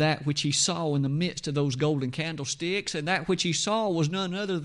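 Throughout the speech, plainly audible Bluetooth LC3 compression is likely: the upper spectrum turns breathy and grainy with noise-filled patches, consistent with a 10 ms transform codec near 48 kbps, smearing spectrogram detail into blocky columns.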